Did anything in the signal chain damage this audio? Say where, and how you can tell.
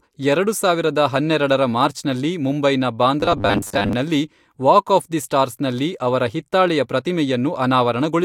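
Yes. From 3.20 s to 3.93 s the speech collapses into robotic sound from repeated short buffers: a rigid, metallic buzz at a fixed 100 Hz that still tracks the rough shape of the speech. The stage is likely the driver or buffer layer starving for input. The playback path fills each gap by looping the last block, and a 100 Hz buzz points to 10 ms repeats. About half the audio in that stretch is repeated material rather than new signal.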